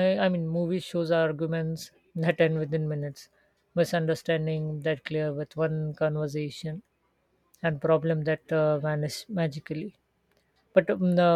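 No technical faults can be heard anywhere in this speech recording. There is nothing in it to place on a timeline.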